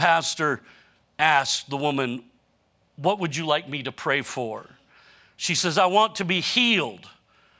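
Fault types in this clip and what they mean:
No fault types are present in this clip.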